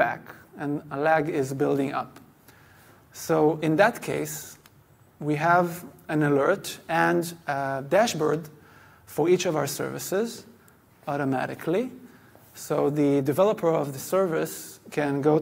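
No dropouts, distortion, glitches or other transmission faults are audible anywhere in the recording.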